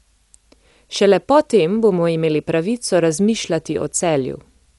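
It's a speech recording, and the whole thing sounds dull and a bit rough, with nothing above 11.4 kHz and a fluttery noise hanging around the tonal parts. That's likely Dolby Digital compression at a low bitrate, fitting something around 64 kbps.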